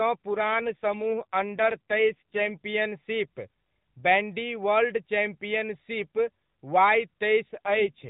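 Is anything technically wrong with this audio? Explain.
Yes. Heard through a narrowband mobile codec whose band stops at 4 kHz, the speech suffers two AMR rate drops, from 0.31 to 2.52 s and again from 7.54 s to the end. In each span the network has pushed the AMR codec to a lower mode, which fits a fall from 12.2 to 5.9 kbps, freeing bits for error protection. Fewer pulses per frame make the voice buzzier and more synthetic. Unlike packet loss, nothing drops out, and unlike band-limiting, the bandwidth stays the same. Only the texture degrades, recovering after the first span but not after the second.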